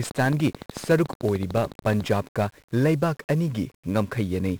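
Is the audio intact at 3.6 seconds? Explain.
No. At 3.6 seconds the speech carries 1-bit DFPWM compression damage, present across the whole clip. Each sample keeps a single bit that nudges an adaptive level up or down. The heavy noise this leaves sounds fuzzy and crackly, with treble dulled or replaced by hiss.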